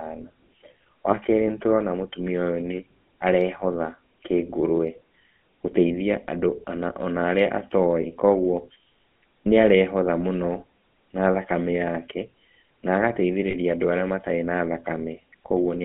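From the start the whole thing runs through the GSM full-rate codec, which fits a 13 kbps telephone coder. Voices are squeezed into a line band of roughly 150 to 3400 Hz, and a buzzy, gravelly roughness is plainly audible because the pulse-driven excitation is rebuilt from sparse samples.

There are lost GSM frames at 1.10 to 1.15 s, just before "kerĩ nĩtũrona mũtumia", and again at 8.02 to 8.07 s. Each sounds like a single 20 ms dropout smeared into a short metallic ring. The decoder holds the settings of the last good frame. At 13.50 to 13.56 s there's a longer ring that fits about 40 ms of loss.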